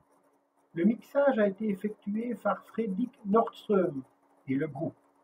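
Speech, with no technical fault to point to anywhere in the recording. Nothing audible interrupts or degrades the sound at any point.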